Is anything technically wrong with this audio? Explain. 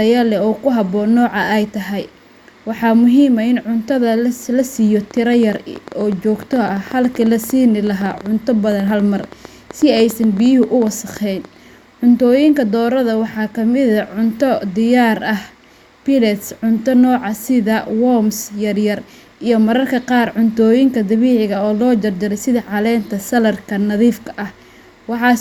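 Yes. From 5.11 to 11.46 s a train of clicks ticks over the speech, about 8.5 per second at an uneven pace, roughly fifty in all, each nearly as loud as the speech. Likely cause: interference from nearby equipment or a faulty connection or power supply injecting repeated pulses.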